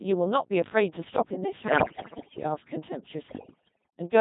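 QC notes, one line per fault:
Throughout: Codec 2 vocoder at about 2.4 kbit/s, heavily damaged. Only pitch, voicing, energy and spectral envelope survive, and the decoder rebuilds the speech from sine waves rather than the original waveform, giving the robotic, buzzy character that persists across the whole clip.
1.68–2.44 s and 3.28–4.00 s: bit errors on digital voice radio. Roughly a fifth, then about 15%, of bits arrive flipped, and each corrupts a whole frame's pitch, level or spectrum, so the synthetic speech lurches into bleeps, warbles and garbled robotic noise.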